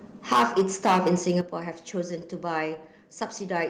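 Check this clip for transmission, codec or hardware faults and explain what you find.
Two faults are present: microphone overload and two sudden steps down in microphone volume.

From 0.31 to 1.38 s the speech shows microphone overload, likely from input gain set about 12 dB too high, so peaks slam the converter's ceiling. Around 7 percent of samples are flattened, giving a harsh crackle; the waveform shows squared-off tops and the spectrogram shows broadband smearing above the harmonics.

The microphone volume is stepped down at 0.33 s by about 4 dB and at 1.41 s by about 9 dB, likely the call software's automatic gain reacting to the clipping. Speech and background drop together, seen as abrupt downward steps in the waveform envelope and a sudden darkening across the spectrogram.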